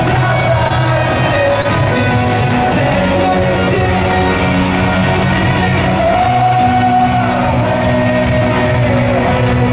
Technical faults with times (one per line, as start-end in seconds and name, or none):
0.68-0.72 short concealed packet loss
1.62-1.66 short concealed packet loss